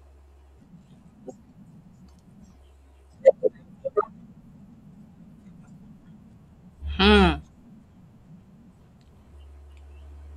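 Listening through the recording, nothing stood out as a technical fault at any point.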